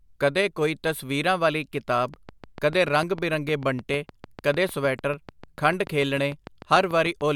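From 2.14 s, just after "ਕੋਈ ਤਸਵੀਰਾਂ ਵਾਲੀ ਕਿਤਾਬ", a train of clicks starts and runs to 7.22 s: some forty near-identical pops at a steady 6.7 per second, peaking around 5 dB above the speech, so they tick through words and pauses alike. The likely source is interference or an interface injecting pulses. A waveform shows evenly spaced sharp spikes, and a spectrogram shows a picket fence of thin vertical broadband lines.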